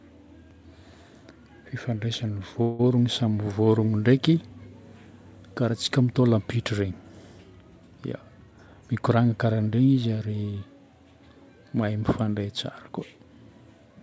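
From 2.62 to 2.81 s the sound stalls into a brief fading buzz or hiss, then resumes intact. This is likely a call audio freeze, with late packets leaving the jitter buffer empty. Between 8.51 and 9.88 s the speech runs hurried at unchanged pitch, about 112% speed. A jitter buffer speed-up trimmed roughly a fifth of a second of pitch periods. Throughout, the G.722-style call path leaves nothing above 8 kHz.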